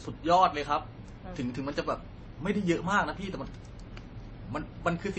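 Across the whole clip the speech sounds dull, with nothing above about 8.3 kHz and two layers of compression artefacts heard together rather than one clean codec signature. The likely cause is transcoding between lossy codecs: the audio appears to have passed through MP3 and then AAC-LC, both at rates that fit roughly 32 kbit/s. The second encoder spent its bits re-encoding the first one's damage and added its own, while the lowest cut-off in the chain remained.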